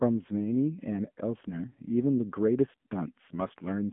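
Speech squeezed through an AMR narrowband mobile codec for the whole clip. The band runs from about 150 Hz to 3.4 kHz, with nothing above 3.5 kHz, so it has that thin phone-call sound. The codec damage is plainly audible, because the coder rebuilds the voice from a vocal-tract model fed by sparse pulses in 20 ms frames. How rough it gets points to a low AMR-NB mode, around 7.4 kbps.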